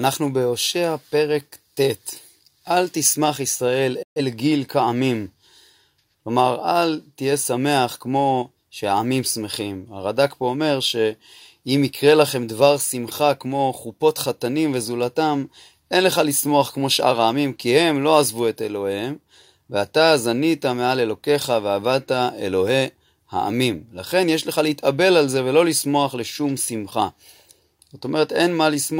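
At 4.02 s the speech cuts out in a digital broadcast dropout, returning at 4.21 s. The receiver stopped getting valid frames and muted, fading down in about 8 ms. Roughly 128 ms of programme is missing, consistent with three lost frames.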